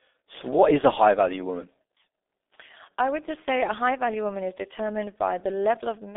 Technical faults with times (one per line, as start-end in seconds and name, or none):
0.00-6.17 G.723.1 codec